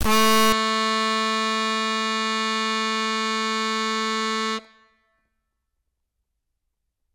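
A stuck bit, likely one data bit held fixed by a faulty line or converter, corrupts the music from 0 to 0.52 s, leaving about half of the sample values off by that bit's weight.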